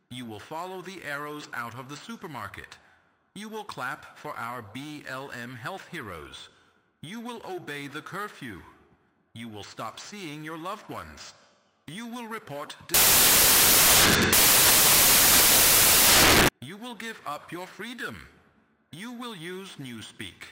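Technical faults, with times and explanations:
12.94–16.49 s, samples built from the wrong bytes: loud, harsh broadband noise swamps the sound, because misassembled sample bytes turn the fast-changing low bits into each value's large part.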